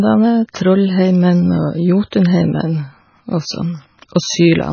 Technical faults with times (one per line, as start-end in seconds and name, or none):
0.00-4.72 MP3 compression
2.10 pre-echo